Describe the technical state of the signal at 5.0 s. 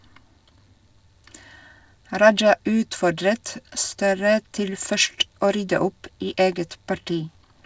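At 5.0 s the speech is intact, with no dropout, glitch or distortion, only the band-limited sound of a wideband call codec with nothing above 8 kHz, which fits G.722 on a WebRTC call path.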